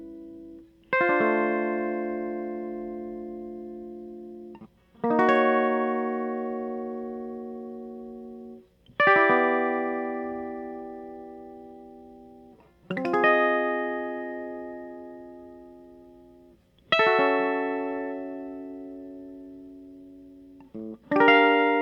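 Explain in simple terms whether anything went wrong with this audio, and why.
Nothing went wrong here: the music comes through steady and whole, with no slips, gaps or glitches to point at anywhere along the way.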